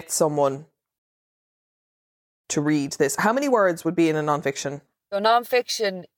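At 0.99 s the speech cuts off abruptly and the output falls silent until 2.44 s, a playback stall of about 1.45 s. The player most likely ran short of data or had its output thread held up, so nothing reached the output until it recovered. On a waveform this is a flat line across the gap. A spectrogram shows a clean vertical edge where all energy stops, then an empty blank band until the sound returns.

From 2.44 s to 5.44 s the speech plays back hurried, as time-compressed catch-up working through the backlog at about 1.15 times normal speed. Small segments are cut out and cross-faded together, so the pitch stays where it should be while the delivery sounds rushed. The spectrogram keeps harmonic spacing unchanged but shows syllables and pauses squeezed closer, with slight smearing at the splice points. The waveform shows the same compression, with envelopes packed more tightly than before the gap.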